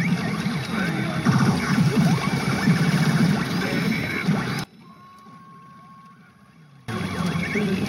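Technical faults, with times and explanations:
4.64–6.88 s, one channel inverted: the centred content falls by about 24 dB to a faint residue, likely because one channel's reversed polarity cancels the shared signal when summed to mono.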